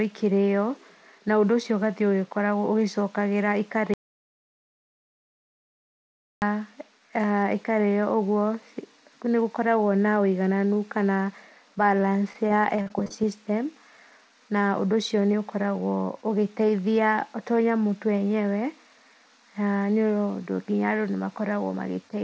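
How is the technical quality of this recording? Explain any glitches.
The recording has two glitches in the speech, and the call path it travelled through limits the bandwidth: nothing is heard above 8 kHz, consistent with a G.722 link at 64 kbps.

Audio dropout to silence, 3.94 to 6.42 s. The input was likely lost, through a disconnected device, a failed link or a mute, while the recorder kept writing silence. The speech cuts off abruptly into dead silence, with no room tone at all, for about 2.48 s, then resumes mid-flow. Whatever was said in that interval is gone.

Repeated packet loss (robotic sound), 12.00 to 13.12 s. Nine separate gaps open up over this stretch, the longest lasting 40 ms. Each hole is patched by stretching the last bit of sound forward, filling about 175 ms in total, with a further 100 ms simply missing. Roughly 16% of the span is concealed audio, so the speech turns choppy and takes on a robotic edge, with small pieces dropped out.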